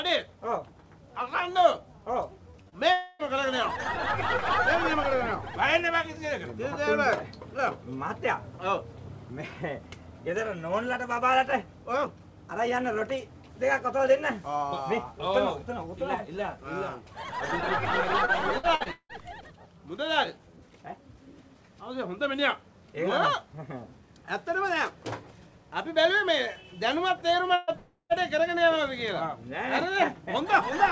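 From 2.51 to 2.56 s, 2.62 to 2.69 s and 2.69 to 2.74 s, short concealed packet loss leaves brief smears where about 30 ms each was lost; the spectrogram shows stretched, blurred harmonics.

From 2.92 to 3.22 s the sound turns into a buzz or hiss fading over roughly 270 ms, most likely a long network dropout; the spectrogram shows a flat, smeared band.

Between 18.25 and 19.12 s, repeated packet loss (robotic sound) causes five gaps, the longest 176 ms, making it choppy; the waveform looks stuttered and blocky.

At 27.55 to 27.70 s, a burst of packet loss swaps about 120 ms for a decaying continuation of the last sound, shown as a tapering envelope.

From 27.76 to 28.12 s, a second probable long network dropout fades through about 330 ms of buzz or hiss, ending in 100 ms of flat silence before the audio resumes.

Across the whole clip the call path cuts everything above 8 kHz, which leaves the spectrogram empty above that line.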